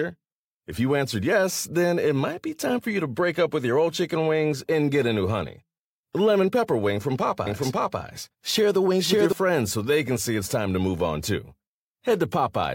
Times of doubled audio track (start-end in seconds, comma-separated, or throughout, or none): 7.46-9.32